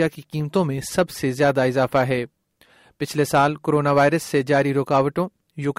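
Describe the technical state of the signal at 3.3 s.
At 3.3 s the signal is intact, with no dropout, distortion, noise or other fault audible at that point.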